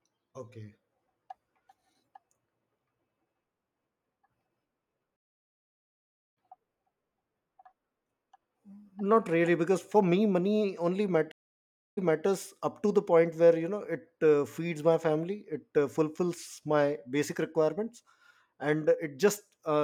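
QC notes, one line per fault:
5.16 to 6.37 s, stream reconnect: the connection dropped and the speech goes silent for about 1.2 s, then a fresh decoder picks up roughly a second further on, so you lose a chunk of the speech, like a live stream that kept running without you.
11.32 to 12.25 s, stream reconnect: another break, about 0.65 s of silence this time, but it resumes 277 ms earlier than where it cut. The server evidently resent a burst after reconnecting, so a short stretch plays twice.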